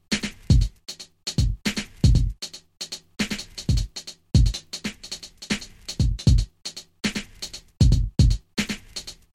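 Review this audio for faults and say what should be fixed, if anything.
There's a doubled audio track running the whole way through: a second full-band copy trails the original by around a second and a half, roughly 5 dB quieter, with no room tail. It's likely the signal is being captured twice, once through a slower path. Route the source through a single monitored path and mute any duplicate sends before recording.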